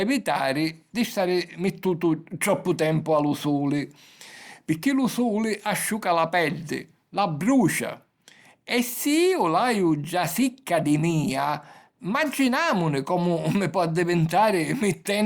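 No technical faults are audible.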